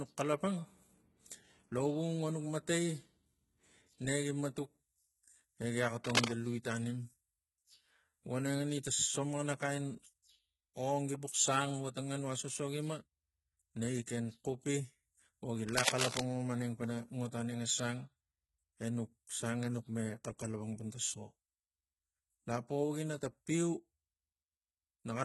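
HE-AAC compression, throughout the speech: the upper spectrum sounds synthesised rather than captured, and nothing remains above 11.8 kHz. This is likely heavy HE-AAC coding, which fits a bitrate around 16 kbps. The codec keeps only the lower bands and fills the treble by copying them upward under a coarse envelope, so the upper harmonics don't line up with the fundamentals. Sibilants come out gritty, lispy and metallic.

Cable scratch noise, from 6.04 to 6.30 s and again from 15.67 to 16.25 s: dense, irregular bursts of rustling crackle sit over the speech, roughly 5 dB louder than it in the first instance and at about the same level in the second. The likely cause is a worn cable or connector being disturbed. Its contact resistance jumps around rapidly, injecting uneven noise into the signal for as long as the contact is unsettled.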